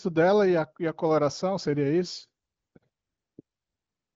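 No technical faults are audible.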